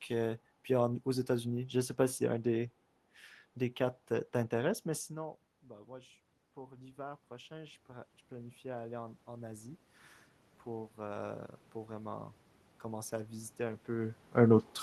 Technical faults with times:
5.09-9.86 automatic gain rising

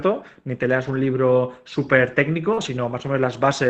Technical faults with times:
0.87-0.97 lost packet rebuilt from error correction
2.53-2.59 short concealed packet loss
2.57-2.67 lost packet rebuilt from error correction

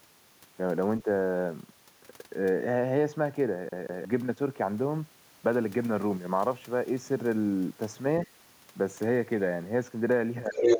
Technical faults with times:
1.04-1.08 speech suppressed in double talk
3.69-4.05 CD stuck on one turn
10.47-10.80 speech suppressed in double talk
10.51-10.78 other side's voice leaking through

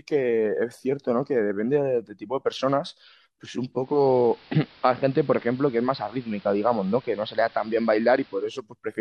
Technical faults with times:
3.71-8.59 digital radio blending to analogue

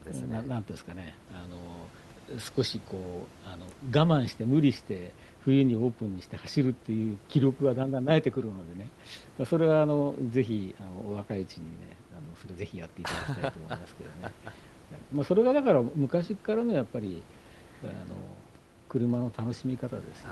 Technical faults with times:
none

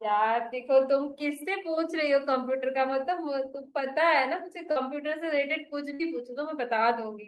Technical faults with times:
4.71-4.78 short concealed packet loss
5.94-6.01 burst of packet loss

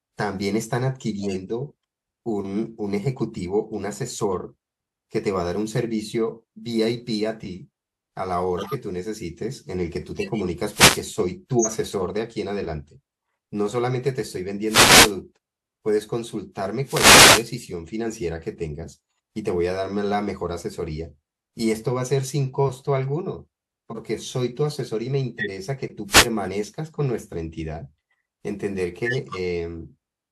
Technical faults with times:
1.21-1.34 corrupt frame decoded
8.57-8.74 corrupt frame decoded
10.16-10.44 corrupt frame decoded
10.69-11.05 wireless microphone noise hit
11.59-11.66 compressed frames skipped
14.65-15.14 wireless microphone noise hit
16.84-17.50 wireless microphone noise hit
23.90-23.98 corrupt frame decoded
25.38-25.50 corrupt frame decoded
26.08-26.28 wireless microphone noise hit
29.05-29.36 corrupt frame decoded

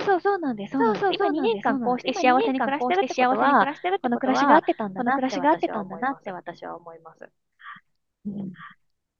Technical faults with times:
0.00-9.19 doubled audio track

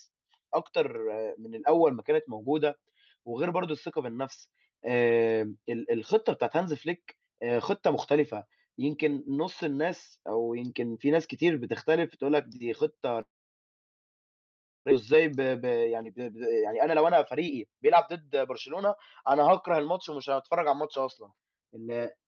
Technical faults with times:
13.21-14.93 long network dropout
15.13-20.83 jitter buffer speed-up

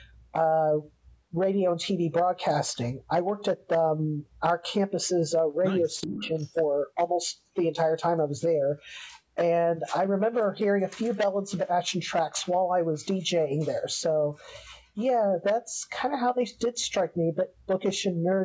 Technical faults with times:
6.01-6.52 echo leak
6.05-6.34 speech suppressed in double talk

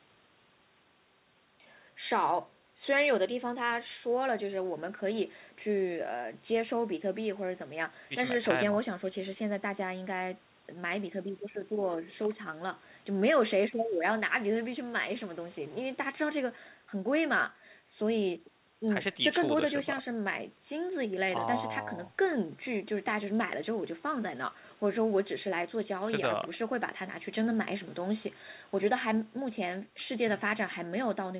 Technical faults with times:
none

